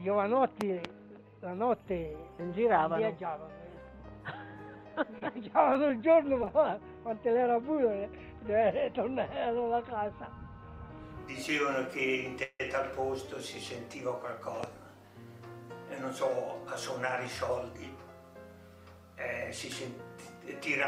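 Right at the start, from 0.61 to 0.87 s, there's a loud pop, actually two in quick succession, peaking roughly 20 dB above the sound. It's likely a voltage spike from a plug, switch or static being shaped by the circuitry downstream, and the audio carries on underneath.

Between 5.18 and 6.50 s you get scattered short gaps, around seven of them, the longest roughly 30 ms. Lost or late packets left small holes, 40 ms missing in all, and the receiver patched about a tenth of a second by extending the last sound, so you hear little ticks and smears.

At 12.43 to 12.61 s there's a call audio freeze. The jitter buffer likely ran dry while packets were held up, so 165 ms got filled with a fading continuation of the last sound, including about 30 ms of silence. Nothing is lost, but everything after arrives 165 ms later.

Another loud pop hits from 14.64 to 14.66 s, a single one about 15 dB above the sound, again sitting on top of the audio rather than interrupting it.

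Finally, from 17.51 to 17.99 s there's a jitter buffer speed-up. The buffer had built up extra delay, so the receiver trimmed out pitch-period slices, roughly 70 ms in total, running the audio at 111% speed with unchanged pitch, which gives it a hurried feel.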